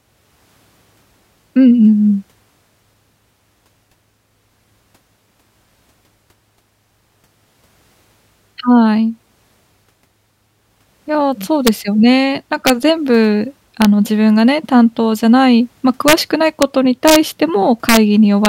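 Violent cracks break through the loudest speech peaks at 11.67 s, 12.67 to 12.70 s, 13.82 to 13.85 s, 16.08 to 16.13 s, 16.62 s, 17.08 to 17.16 s, 17.89 to 17.97 s and 18.45 s. This is integer overflow: peaks exceeding full scale by up to about 3 dB wrapped to the opposite sign instead of being limited.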